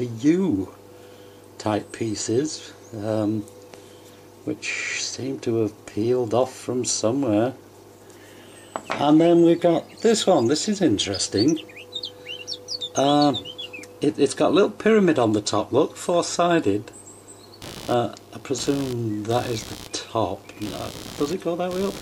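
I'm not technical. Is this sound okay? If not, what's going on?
No. Computer activity noise starts at 17.62 s and runs to the end: a buzzing, scratchy sound, pulsing about seventy times a second. The computer's changing workload shakes the electrical ground shared with the audio circuit, so its activity leaks into the recording.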